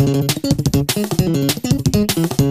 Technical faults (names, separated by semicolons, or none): wrong sample rate